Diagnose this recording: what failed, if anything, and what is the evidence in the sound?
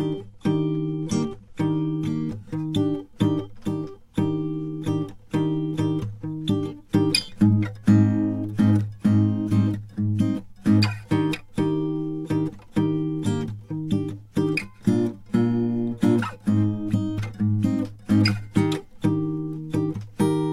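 The playback stage started on a low-bitrate rendition of an adaptive stream. From 0.0 to 2.0 s the music sounds dull and smeared with coarser codec artefacts, which fits a 48 kbit/s AAC stream, then sharpens abruptly with no gap as it switches up, consistent with 96 kbit/s.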